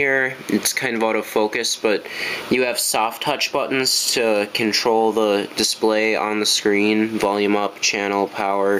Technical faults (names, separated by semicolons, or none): gain pumping